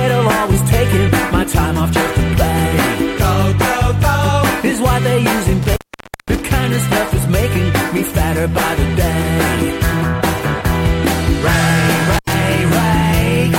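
Intermittent contact at 5.63 to 6.41 s and 12.12 to 12.34 s: a loose connection briefly opens, cutting the sound for about 517 ms, then 86 ms, with crackle at each edge.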